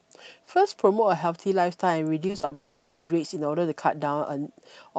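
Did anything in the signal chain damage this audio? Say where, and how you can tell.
Yes, the damage is at the network stage, with packet loss and concealment in the receiver. From 2.27 to 2.53 s there is repeated packet loss (robotic sound): five short holes, the longest about 60 ms, each patched by extending the preceding sound. About half of that quarter-second is synthesised rather than received, so the audio turns choppy, with fragments missing between the patches.

Straight after, from 2.53 to 3.11 s, the sound stops changing and turns into a fading, artificial buzz or hiss for roughly 0.56 s, with no true silence. The speech then resumes further on with that stretch simply gone. This is most likely a long network dropout: nothing arrived for over half a second, and the jitter buffer kept concealing by stretching the last received sound until real packets returned. The Opus call path limits the band to 8 kHz throughout.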